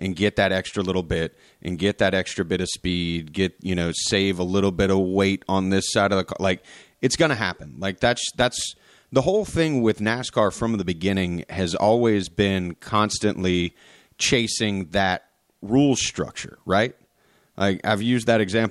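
Speech, with no audible faults.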